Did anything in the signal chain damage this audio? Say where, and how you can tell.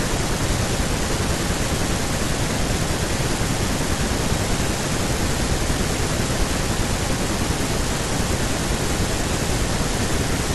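No, nothing damaged this audio.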